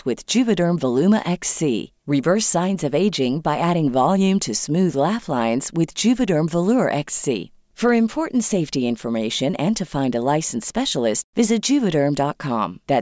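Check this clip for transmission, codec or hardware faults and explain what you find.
Nothing in the speech here points to a transmission, codec or hardware problem.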